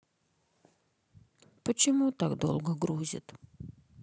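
Listening to the speech recording, nothing stood out as a technical fault at any point.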